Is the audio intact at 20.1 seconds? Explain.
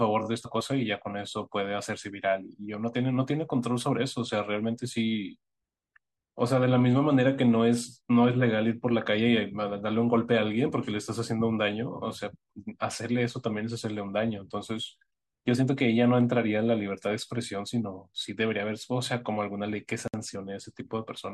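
No, the speech drops into a gap of about 59 ms from 20.08 to 20.14 s with smeared edges. It's a gap at a join of encoded pieces, where untrimmed encoder delay and padding sit between separately encoded segments.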